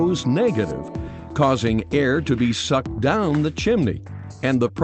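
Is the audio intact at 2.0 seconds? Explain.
No. Clock drift between sender and receiver runs through the whole clip: the sender's clock is roughly 4% fast, so the receiver's jitter buffer keeps overfilling. Repeated timing corrections from 0.05 to 4.70 s trim short pieces to keep pace, playing the audio at 104% speed. Around 2.0 s this comes through, if at all, as faint hiccups or a slightly unsteady tempo.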